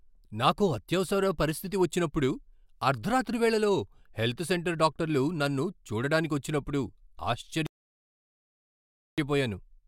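At 7.66 s the speech stops dead. Silence holds until 9.18 s. This is a rebuffering stall. The player ran out of downloaded audio and waited for more. Speech then resumes exactly where it broke off. Nothing is skipped, but 1.51 s is added.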